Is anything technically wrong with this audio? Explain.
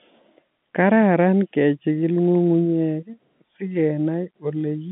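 No, this is speech over an ordinary G.711 telephone line, with the expected narrow band from about 150 Hz to 3.5 kHz and nothing beyond what that path normally does.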